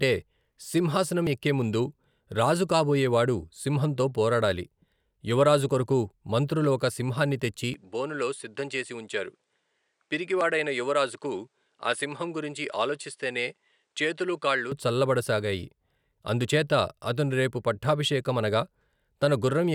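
Just after "మంత్రులు ఒక సింహాన్ని తెచ్చి", at 7.74 s, the speech turns duller and a little quieter, losing everything above about 10.5 kHz, with a faint new background hiss well beneath it. There is no gap at the change. At 14.72 s the fuller sound returns. This is likely an input switched to a poorer device, a narrower-band microphone carrying its own tone, lower level and noise floor for those seven seconds.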